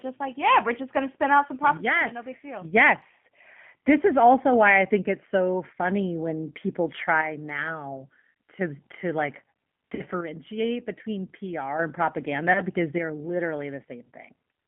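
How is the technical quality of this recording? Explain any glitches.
The technical quality is poor. Narrowband codec coding runs throughout, with two brief dropouts and three level dips.

G.729 codec, throughout: The speech is coded at 8 kbit/s by modelling the vocal tract and pitch, with nothing kept outside roughly 150 Hz to 3.4 kHz. The result sounds muffled, rough and plainly synthetic.

VoIP packet loss concealed by the speech codec, at 9.95–10.02 s and 12.53–12.63 s: The decoder filled missing audio by stretching its last pitch and filter while fading the gain. You hear a short fading smear. About 40 ms of audio is missing in the first and 20 ms in the second, which fits two lost packets and then one. The voice stays weak for a moment after each.

One channel drops out, at 7.21–8.61 s, 10.21–11.79 s and 12.98 s to the end: One stereo channel was likely lost, so the mono sum carries only half the signal. 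The level falls abruptly by about 6 dB and recovers at the end of the first two.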